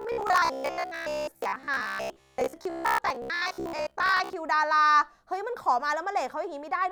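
From 0.02 to 4.35 s the speech has a robotic sound from repeated short buffers, a rigid metallic buzz at 66.7 Hz. The likely cause is audio arriving too seldom, so a 15 ms block is replayed in place of most of the real signal. A waveform shows identical 15 ms cycles, and a spectrogram shows evenly spaced 66.7 Hz harmonic lines.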